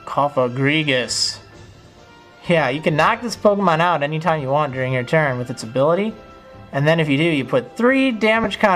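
At 8.44 s a single frame of about 10 ms is dropped, consistent with lost LE Audio frames. The LC3 decoder fills the gap by repeating the previous spectrum with randomised phase signs, so the sound briefly smears into a short noisy blur before normal decoding resumes.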